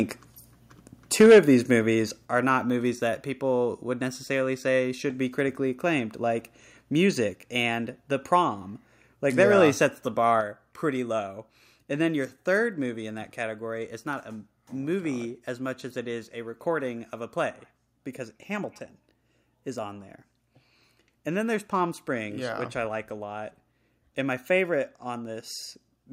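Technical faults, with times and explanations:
1.2–1.39 s and 9.4–9.63 s, microphone overload: the input gain was likely set too high, so the loudest speech peaks ran past the converter's ceiling and had their tops sliced flat. The first burst overshoots by about 6 dB, with roughly a fifth of the samples flattened, giving an audible harsh crackle. The second overshoots by only about 1 dB and clips just a tiny fraction of samples, so the roughness there is slight.
1.26 s, 2.25 s, 7.35 s and 10.41 s, microphone volume stepped down: the call software likely reacted to the hot input by cutting the device's microphone gain in single jumps, of about 2 dB, 4 dB, 2 dB and 5 dB respectively. Each jump makes both speech and background suddenly quieter. The first falls right inside the 1.2 s distorted peak, and the later ones keep lowering the level in stages, adding up to about 13 dB by 10.41 s.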